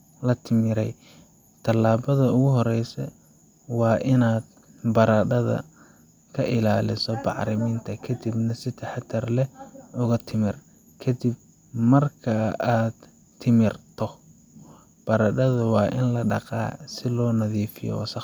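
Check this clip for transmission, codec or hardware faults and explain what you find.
No faults heard.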